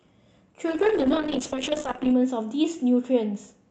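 From 0.71 s to 3.61 s the speech turns rough and watery, with the top end thinning out so it sounds muffled, worst for about 1.44 s before it recovers. This is a call bitrate drop: the call's bandwidth estimate fell and the Opus encoder coded far more coarsely, which fits a fall from around 64 kbps to roughly 6 kbps, discarding high frequencies that normally extend to about 8 kHz on this path.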